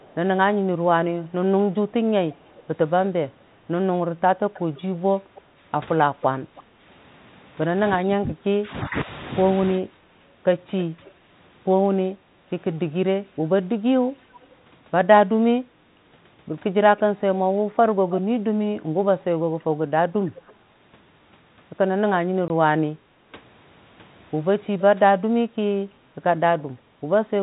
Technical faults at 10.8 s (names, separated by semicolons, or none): speech suppressed in double talk; echo leak